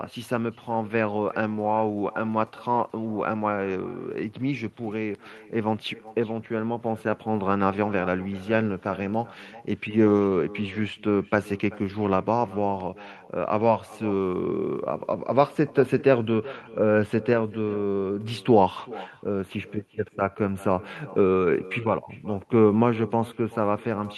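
Echo with no canceller runs throughout. A loudspeaker-to-microphone return sends the speech back, about 20 dB quieter, nearly half a second late, and thin.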